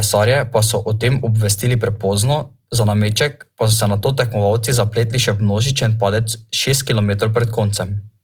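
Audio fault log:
Throughout, Opus compression: the speech sounds grainy and rough but stays full-bandwidth up to about 20.2 kHz, likely from low-bitrate CELT-mode encoding near 24 kbps.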